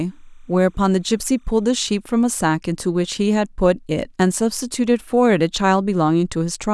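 Timecode bleed runs from 0.0 to 2.0 s at the start of this speech recording: a faint, steady chirping warble sits behind the voice, roughly 45 dB below it. Linear timecode from an adjacent track or cable is leaking into the audio path. Its square-wave code flips between tones near 1 and 2 kHz as the bits change, and the rhythm of the warble fits 30-frame-per-second code.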